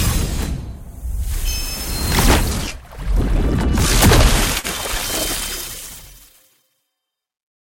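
At 4.59 to 4.67 s there is a short stall from a late packet: the jitter buffer ran dry, so the last sound was stretched for about 42 ms, then playback resumed where it left off. Unlike a lost packet, nothing is skipped; the sound is just held, adding 42 ms of delay.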